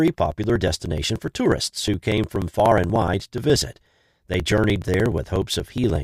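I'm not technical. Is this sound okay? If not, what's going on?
No. Periodic USB or driver dropouts from 0.08 to 5.96 s: every 0.06 s the computer briefly stalls the audio connection and skips a tiny slice of speech, causing steady ticking.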